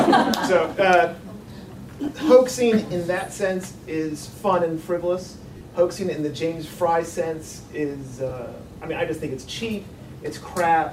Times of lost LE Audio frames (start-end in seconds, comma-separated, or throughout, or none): 2.07, 5.57-5.61, 8.29